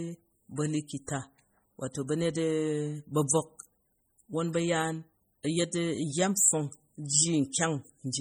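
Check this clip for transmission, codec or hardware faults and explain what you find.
One codec fault runs through the whole clip: MP3 compression, likely from an encoder starved of bits, which fits a low bitrate of around 32 kbps. Short of bits, the encoder discards weak frequency lines that then drop in and out from frame to frame, giving the speech a heavy watery, swirling texture, with metallic chirps on s sounds and smeared consonant attacks. Nothing is present above 20.9 kHz.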